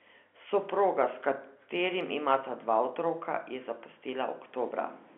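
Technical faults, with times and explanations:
No technical faults are present. The speech is band-limited to about 250 Hz to 3.5 kHz, with nothing above 4 kHz, which fits G.711 mu-law telephone coding at 64 kbps, and any coding damage is faint at most.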